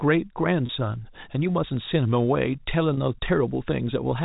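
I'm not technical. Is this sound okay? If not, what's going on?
No, there are two small glitches. At 0.66–0.69 s and again at 2.94–2.97 s, the speech briefly catches with a slightly held, buzzy sound. That's packet loss with pitch repetition. About 30 ms of audio went missing each time, which fits a single dropped packet, and the receiver covered the hole by replaying the last bit of the voice's pitch. The gaps are short, so you hear a tiny stuck buzz rather than silence. The narrow, phone-line sound comes from the normal telephone coding.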